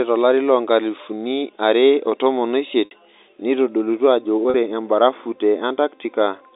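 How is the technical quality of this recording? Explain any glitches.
Two brief dropouts break up the speech, which comes over a telephone-band G.711 line cut off near 3.7 kHz.

Packet loss with pitch repetition occurs at 2.85 to 2.91 s, right after "tolari loonkalifuni are otomon", and at 4.50 to 4.54 s, just before "embarafu te". About 60 ms and then 40 ms of audio went missing, which fits 10 ms packets. The receiver filled each gap by repeating the last pitch period and fading it, so the shorter one sounds like a short, held, buzzy tone instead of a clean cut, while the longer one fades into silence before the speech returns with a short cross-fade.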